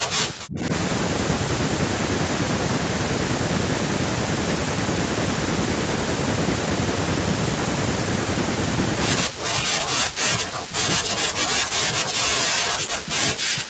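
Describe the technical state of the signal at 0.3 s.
At 0.3 s the speech sits inside a stretch of heavy attenuation running from 0.00 to 0.71 s, likely speech suppressed in double talk: with both ends talking, the echo canceller cannot tell the near talker from loudspeaker echo and pulls everything down. Level drops by roughly 40 dB at its deepest, so the talker sounds thin, broken or nearly gone. On the waveform the envelope collapses to a sliver; on a spectrogram the energy below the 8 kHz band ceiling fades to near-blank patches.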